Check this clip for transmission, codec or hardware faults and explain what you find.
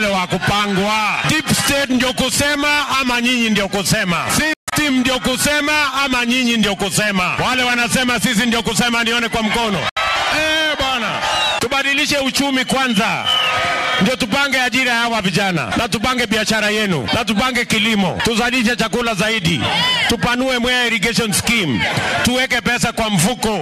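Two brief gaps are audible, at 4.53 to 4.73 s and at 9.89 to 9.97 s, and both sound like Bluetooth dropout, likely from audio packets arriving too late at the headphones and being discarded. The first loses about 160 ms in broken stretches, the longest about 140 ms. The second loses about 70 ms. The sound resumes further along rather than where it stopped, which separates this from a buffer stall that pauses and then continues.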